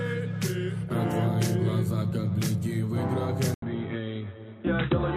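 At 3.54 s the audio breaks for 80 ms, then runs to the end band-limited, with nothing above 3.9 kHz. It is a few decibels quieter, with new background noise well below the signal. The input likely switched to a poorer device.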